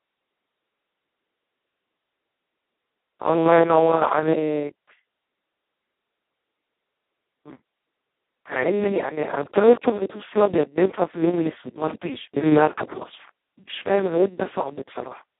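Across the whole clip the speech passes through the Speex codec at its lowest setting, a starved data rate that fits roughly 2 kbps, leaving almost nothing to code the excitation. The speech comes out hoarse, buzzy and robotic, close to a vocoder. The band is squeezed to about 200 Hz to 3.5 kHz, with nothing above 3.8 kHz, so the sound is thin and muffled, with no air or sibilant detail.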